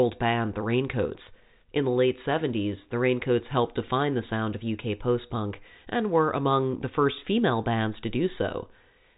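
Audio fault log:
No faults are present: the speech carries the band limit of G.711 telephone coding, with nothing above about 3.8 kHz, and any coding damage is at most faint.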